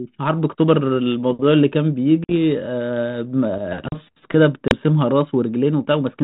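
Speech coming through what sounds like a G.726 ADPCM telephone path, with the band topping out at 4 kHz and the light grain you'd expect from the 32 kbit/s DECT-style rate. There are two spots of packet loss on an ADPCM call, at 2.24 to 2.32 s (about 50 ms gone, a handful of packets) and at 4.68 to 4.73 s (about 30 ms, a few packets). Each time the audio drops into a hard-edged silent hole, then comes back slightly distorted, because the decoder's adaptive predictor and step size have drifted away from the sender's. It sorts itself out within a few tens of milliseconds. Between those, at 3.88 to 3.92 s, there's a CD skip: a brief mute of roughly 40 ms, and then the audio carries on from a different point, as if the laser jumped to another turn of the disc spiral.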